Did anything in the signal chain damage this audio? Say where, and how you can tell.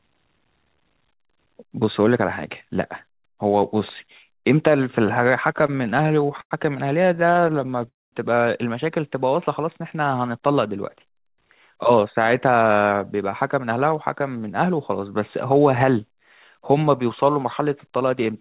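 Yes. The damage sits in the network and the receiver's jitter buffer, in a call path whose G.711-style band stops at 4 kHz.

Repeated stalls (stutter) appear from 5.58 to 6.53 s and again from 7.03 to 7.89 s. Each burst has 14 hitches. The first burst hides 225 ms of filled sound, about a quarter of that stretch, and its longest hitch lasts 98 ms. The second fills 141 ms, and no hitch there exceeds 15 ms. Packets kept arriving late. The buffer ran dry and the receiver stretched the last sound each time. Nothing is lost. The audio just drags and trips.

A call audio freeze follows at 7.89 s and runs to 8.14 s. A brief smear of the last sound fades into about 210 ms of silence. Then the audio picks up exactly where it stopped. The likely cause is packets held up in transit, emptying the buffer. The concealment inserts 234 ms of gap, and the delay grows by the same amount. Nothing is cut.

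A jitter buffer speed-up shows up from 11.33 to 13.15 s at 108% speed, then from 13.59 to 14.95 s at 106%. The pitch stays put, but the delivery sounds rushed. The buffer had banked surplus audio. To shed that delay, the receiver snipped out short pitch-period slices, many in a row. That trims roughly 150 ms and then about 100 ms.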